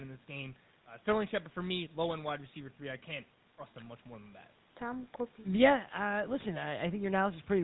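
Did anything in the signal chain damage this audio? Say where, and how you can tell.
Yes, at the codec stage: the speech went through the GSM full-rate codec, and the damage is plainly audible from start to finish. The codec models the vocal tract as a filter and drives it with a coarse pulse train, keeping only one excitation sample in three, at a rate that points to the 13 kbps full-rate mode. That crude excitation gives the voice a buzzy, gravelly roughness, and the band stops at 4 kHz.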